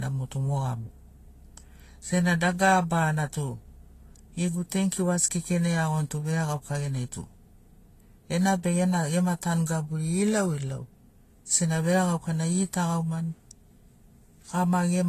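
From start to finish the speech carries a layered, smeared coarseness: the artefacts of two codecs are heard together, and nothing is heard above about 14.2 kHz. This is likely transcoding between lossy codecs, with the signature pointing to an AAC-LC encode at a modest bitrate being re-encoded as Vorbis at an even lower one. The second encoder wastes bits reproducing the first one's damage, adds its own, and keeps the lowest band limit in the chain.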